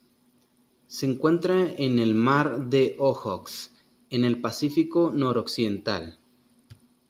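Nothing in the speech stood out as a problem on listening.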